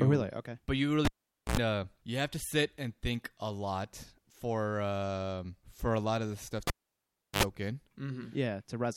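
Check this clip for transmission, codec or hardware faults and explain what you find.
The speech has two cable pulled and plugged in faults: at 1.05–1.57 s after "really okay but you", and at 6.67–7.43 s after "lot of the stuff". Each has a pop, a dropout of 473 ms and 709 ms, a 77 ms and 73 ms burst of 60 Hz and 50 Hz mains hum, then a reconnection pop.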